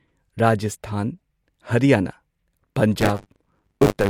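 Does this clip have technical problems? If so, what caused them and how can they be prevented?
Yes. From 3.0 s to 4.1 s the speech picks up a robotic 100 Hz rattle. This is buffer tearing: the ring buffer's writer and reader have slipped, so about a fifth of each period replays stale audio, hard-joined on both sides. Lock writes to the hardware read position and re-align pointers after any stall.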